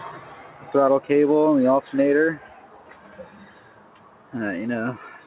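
A noise suppressor applied to music or sounds is running throughout. It treats sustained, steady content as noise, so level swings by around 10 dB as attacks pass and held tones and tails are pulled down. The result pumps and thins. On a waveform the envelope looks jagged and uneven rather than smoothly decaying. On a spectrogram, sustained partials fade in and out in patches while onsets stay bright.

Sound cut by the noise suppressor is clearest at 0.42–0.64 s, 2.43–3.1 s and 3.49–4.33 s, each dipping by about 5 dB. The longest stretch, near a second at 3.49 s, audibly sags. Steady portions sink and decays are truncated early. The waveform shows a dropped, flattened envelope in those spans, and the spectrogram shows dimmed, shortened tails.

The band stops at 4 kHz, which fits a narrowband G.711 A-law call path. That path is working as expected.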